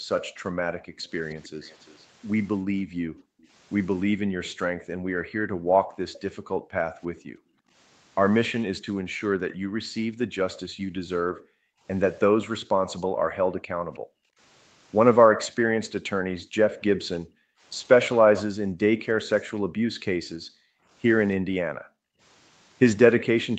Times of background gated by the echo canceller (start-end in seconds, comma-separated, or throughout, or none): 0.00-1.09, 2.66-23.58